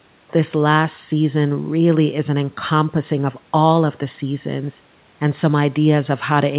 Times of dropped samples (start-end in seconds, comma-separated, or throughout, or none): none